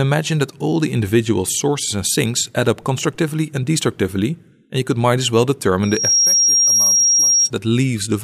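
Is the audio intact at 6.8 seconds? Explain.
No. At 6.8 s the audio is disrupted by a loudspeaker feedback squeal running from 5.83 to 7.50 s. The microphone picks up its own loudspeaker, and the loop gain at 5.6 kHz exceeds one, so that tone swells within a fraction of a second into a steady squeal roughly 5 dB above the signal.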